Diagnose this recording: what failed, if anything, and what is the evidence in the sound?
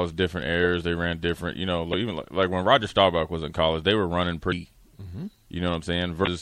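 The codec stage shows plain damage throughout the speech. The upper band has a watery, swirling quality where weak spectral components appear and vanish from frame to frame. Sibilants come out metallic and consonant onsets are smeared. This is likely MP3 compression at a bitrate that fits about 64 kbps. At that rate the encoder runs short of bits and zeroes quieter frequency lines to stay within budget.

There are three bursts of damaged data in the compressed stream, each lasting about 40 to 50 ms: at 1.90 to 1.94 s just after "ran different you know", at 4.48 to 4.54 s just after "college they were running", and at 6.23 to 6.29 s near the end. Each one briefly breaks the speech. This points to the storage or transport stage. Corrupted bytes make the decoder misread or reject frames, lose sync and resume at the next valid frame header.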